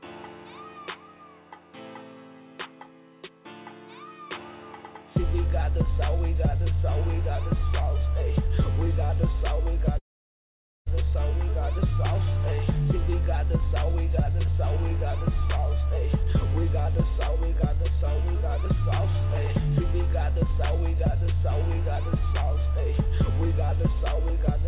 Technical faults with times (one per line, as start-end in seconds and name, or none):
9.98-10.88 call audio freeze